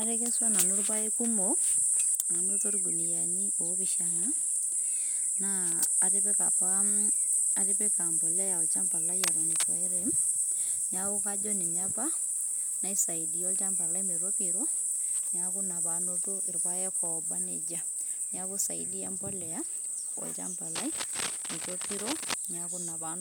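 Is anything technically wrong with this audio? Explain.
Yes. Cable scratch noise appears from 9.21 to 9.64 s, only about 5 dB below the speech, and again from 20.75 to 22.35 s, about 10 dB down. Dense, irregular scratchy bursts ride over the signal, likely from a worn connector or cable shifting and changing contact resistance.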